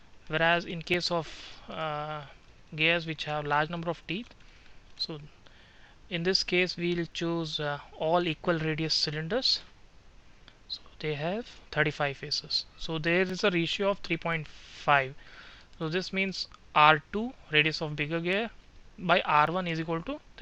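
A click or pop recurs every 3.09 s from 0.94 s to 19.47 s, about seven times in all. These are likely clock drift buffer slips: two clocks differing by roughly 0.1% let the buffer drift until a block of around 150 samples is dropped or repeated.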